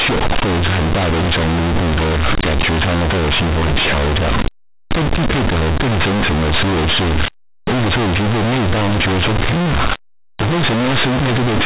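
From start to finish the speech is hit by companded audio read as linear: mu-law bytes are played as plain 8-bit samples without expansion. Each sign change swings across half the range, so quiet passages equal loud ones, giving harsh, buzzy distortion and heavy noise in pauses. The underlying telephone-band mu-law coding is intact.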